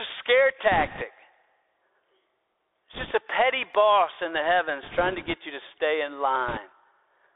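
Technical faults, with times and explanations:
Throughout, Bluetooth CVSD headset codec: the speech has passed through the narrowband headset codec, which sends one bit per sample at 64 kHz telling the decoder only whether to step up or down, with the step size adapting to the signal. The band here runs roughly 300 Hz to 3.6 kHz, so everything above is gone. The damage is plainly audible: sharp, loud high-frequency movement outruns the step and distorts, sibilants come out scratchy, and a granular hiss sits under the speech.
0.72–1.03 s, 2.93–3.13 s, 4.83–5.34 s, 6.48–6.58 s, bit errors on a Bluetooth voice link: in these four stretches flipped bits on the headset link add a rushing, crackly noise over the speech. Because each CVSD bit carries only one small step and the error fades as the step adapts, there are no hard clicks, just a wash of crackle. It is densest in the brief burst near 6.5 s, where the error rate is highest at around 5 percent. 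The long 4.83–5.34 s stretch, at around 1.5 percent, is milder.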